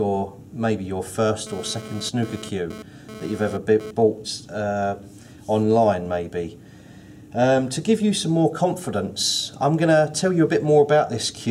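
From 1.47 s to 3.91 s, GSM phone buzz appears: a nearby 2G handset's 217 Hz radio bursts, rectified by the audio circuit, give a harsh, harmonic-rich rasp about 16 dB below the signal. Unlike mains hum, 217 Hz isn't a 50 or 60 Hz multiple.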